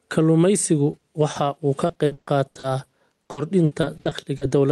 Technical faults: gain pumping; short concealed packet loss; repeated packet loss (robotic sound)

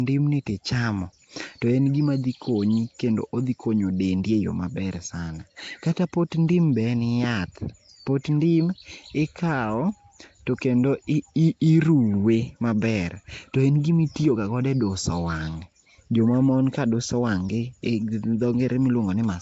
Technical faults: Nellymoser compression

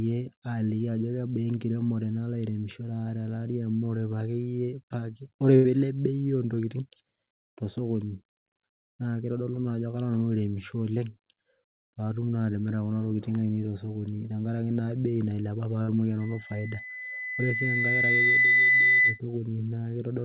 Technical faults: burst of packet loss; loudspeaker feedback squeal

